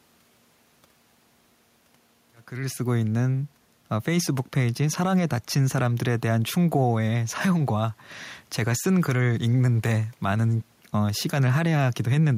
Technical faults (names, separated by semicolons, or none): none